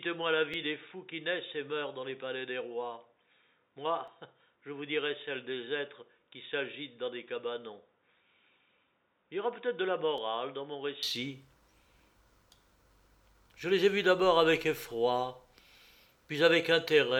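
From the start until 11.03 s the audio is dull and boxy, about 10 dB quieter and with its own faint noise floor, likely an input switched to a poorer device. It clears abruptly at 11.03 s with no gap, unlike a gradual filter change. Single sharp clicks at 0.54, 4.08, 10.18 and 11.16 s point to dropped samples, each under a millisecond, heard as clicks rather than audible gaps.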